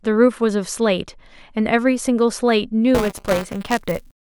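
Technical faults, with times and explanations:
2.94 to 4.23 s, buffer tearing: the program filling the output ring buffer and the hardware draining it fall out of step, so their positions cross inside every period. A small slice of each buffer, roughly a twentieth, still holds audio from about 10 ms earlier, joined by hard edges on both sides. Those joins recur 200 times a second, pointing to a 5 ms buffer period and giving the speech a steady robotic buzz that lasts to the end.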